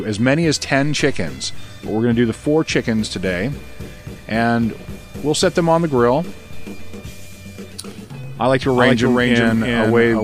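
From 8.73 s to the end, a doubled audio track appears: a full-band copy about 0.4 s behind, roughly 5 dB quieter, likely from a second capture path, showing as abruptly starting, time-shifted repeated waveform and spectrogram patterns.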